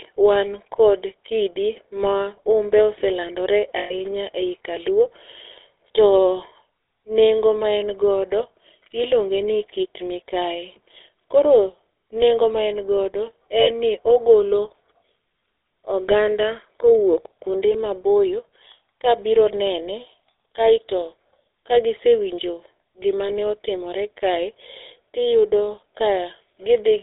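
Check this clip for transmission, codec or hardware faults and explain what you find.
The speech carries GSM full-rate coding throughout, plus three short dropouts from lost GSM frames.

GSM full-rate codec: pulse-excited vocal-tract modelling gives a buzzy, gravelly roughness, consistent with 13 kbps. On a spectrogram, energy sits only between 150 Hz and 3.7 kHz.

Lost GSM frames: at 3.78–3.94 s before "ei kaluo", 13.60–13.70 s between "nengo ma en godo" and "ni ogolo", and 23.26–23.29 s before "otimore kae". Each gap is filled by repeating the last good frame, heard as a metallic ring. On the spectrogram it appears as frozen, smeared bands.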